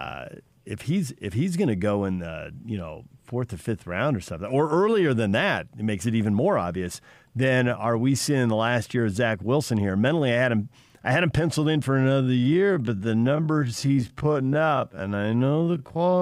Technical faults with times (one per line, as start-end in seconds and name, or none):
11.90-16.21 time-stretched section